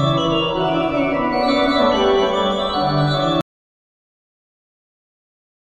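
The input feed was likely lost at 3.41 s, with the recorder continuing to write silence, so this is an audio dropout to silence: the sound cuts off abruptly mid-flow and about 2.3 s of silence, with no room tone, runs to the end.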